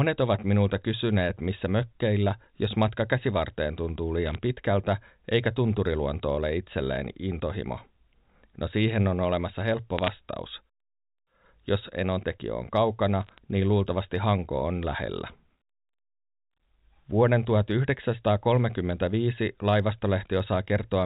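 Bit errors on a digital phone line break into the speech three times: from 4.26 to 4.35 s, after "jos matka käsivarteen tuntuu"; from 9.99 to 10.08 s, after "siihen on olemassa helppo"; and from 13.24 to 13.38 s, just before "niin luultavasti". Each burst is a cluster of sharp ticks, where flipped bits in the 64 kbps A-law G.711 stream corrupt single samples. The error rate is around two in a thousand bits. Unlike dropout or concealment faults, the speech around each tick stays intact and band-limited below 4 kHz, with no gaps or smearing.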